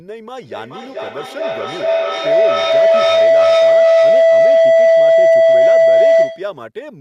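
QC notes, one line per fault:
0.42–6.66 s, feedback howl: a room loop keeps gaining level, swelling to about 17 dB above the speech, repeating roughly every 0.4 s; the spectrogram shows a bright band near 700 Hz.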